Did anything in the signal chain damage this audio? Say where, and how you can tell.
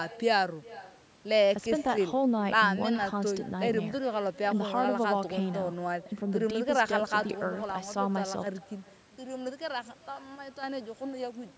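Yes: echo with no canceller runs throughout this speech. The far end's loudspeaker feeds its microphone, returning a thin copy about 21 dB down roughly 0.4 s later: a discrete delayed repeat, not room reverb.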